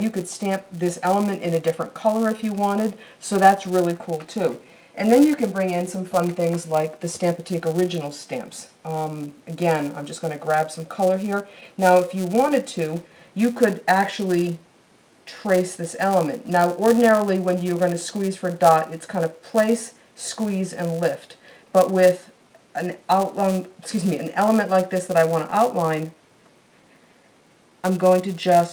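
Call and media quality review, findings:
Clock drift between sender and receiver, throughout. Uneven small timing hiccups. The sender clock runs roughly 4 percent slow against the receiver. The jitter buffer keeps draining, so the receiver repeats short pieces to fill it. Probable component: sender clock or receiver resync.

Filter restarted on every block, throughout. A steady buzz at 188 Hz rises and falls with signal level. This fits a 256-sample block. Filter state resets each block, so every block opens with a small transient. Probable component: block-based filter stage.

Repeated timing corrections, 0.17 to 28.57 s. Unsteady, slightly slowed tempo at 97 percent speed. Short pieces are repeated at uneven intervals, always in the same direction, adding around a second overall. Probable component: receiver playout adaptation compensating for the slow sender.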